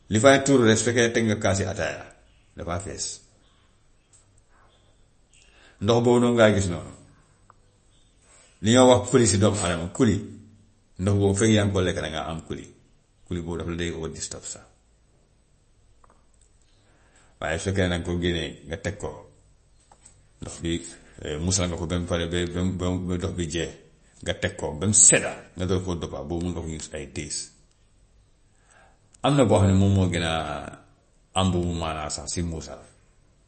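From start to finish, the speech carries plainly audible damage, likely from MP3 compression at a low bitrate, around 35 kbps. Nothing remains above 8.3 kHz. Weak frequency lines drop in and out between frames. The result sounds watery and swirly, with smeared attacks.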